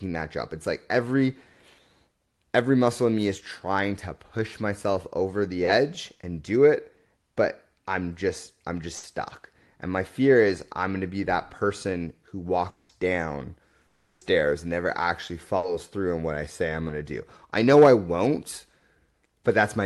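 At 8.97 s a burst of packet loss cuts out about 60 ms of speech. The receiver holds the last sound and briefly fades it out, then playback picks up further along with that short stretch gone.

At 12.69 s the speech turns into a decaying buzz-hiss for about 200 ms, and at 13.87 s the same happens for about 340 ms. Neither gap falls to silence. Both are likely long network dropouts, where nothing arrived and concealment filled the whole gap.

At 15.57 s a second packet-loss burst removes another 60 ms, heard as a short held tail before the audio resumes.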